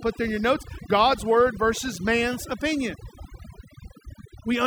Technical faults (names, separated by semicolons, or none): overdone noise removal